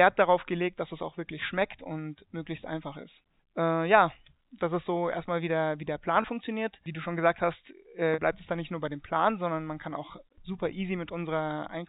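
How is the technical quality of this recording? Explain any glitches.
Two brief dropouts from packet loss with pitch repetition mark this G.711 telephone-band speech, whose content stops near 4 kHz.

At 6.22–6.24 s and 8.14–8.18 s (after "schon gesagt hast äh", before "bleibt es dann nicht"), the receiver repeats the last pitch period to cover 20 ms and 40 ms of missing audio. Each gap is heard as a short, held buzz. On the waveform it appears as identical repeating cycles, and on the spectrogram as flat, unmoving harmonics.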